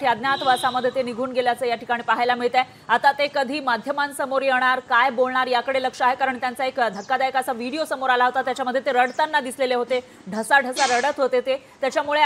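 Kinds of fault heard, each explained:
Nothing in this recording stood out as a problem on listening.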